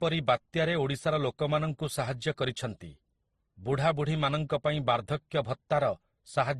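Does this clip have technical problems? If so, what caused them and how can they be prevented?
Yes, the speech has a layered quality throughout, with nothing above 12.1 kHz. That's likely transcoding between lossy codecs: it sounds like a Vorbis stage, then MP3, then Opus, each at roughly 30 to 50 kbit/s, stacking their artefacts on each other. To prevent it, keep a lossless master and encode to the final lossy format only once.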